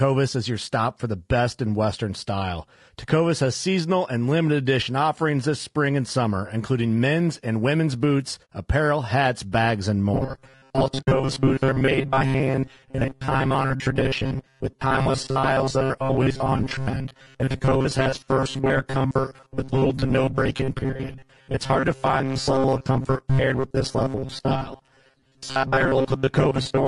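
Across the whole recording the speech sounds rough and grainy, with noise filling the gaps between harmonics on a spectrogram, likely from low-delay AAC compression at a low bitrate, around 32 kbps. At 8.46 to 8.48 s, between "men's and women's boots" and "apparel hats bags and", AAC frame loss with muting leaves a soft-faded gap, a brief near-empty column in the spectrogram. From 10.14 s to the end, robotic sound from repeated short buffers turns the voice into a rigid metallic buzz, likely because short chunks are replayed in place of most of the real audio. This shows as evenly spaced 133 Hz striations and a repeating waveform. A second muted AAC frame loss at 11.01 to 11.08 s fades out and back in over a slightly longer, roughly three-frame gap.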